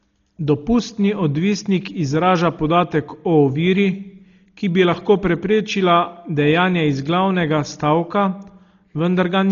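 Speech, band-limited at 6.9 kHz throughout. It sounds dull, with rough, fluttering noise around tones. Likely Dolby Digital compression, at a bitrate near 32 kbps.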